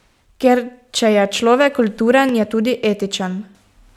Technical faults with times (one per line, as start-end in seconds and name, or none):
2.29-2.31 loud pop